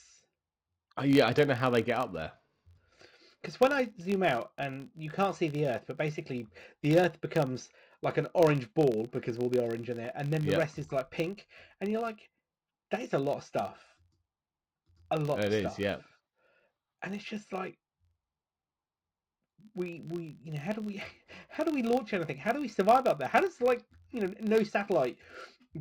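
From start to finish, a low buzz of about 46.9 Hz rides under the speech, made of regular ticks that grow louder as the talker gets louder and fade in the pauses. This is a filter restarted on every block. Instead of carrying its memory across, the filter begins each block from silence, so every block opens with a small transient. The tick rate fits a 1024-sample block.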